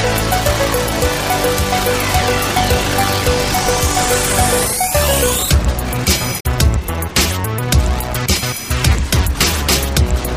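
At 6.36 s, a brief burst of damaged data in the compressed stream lasts about 90 ms, to 6.45 s. Corrupted bytes leave the decoder unable to read those frames. It loses sync and hunts for the next valid header. The result is a short chirp, squawk, click or hole.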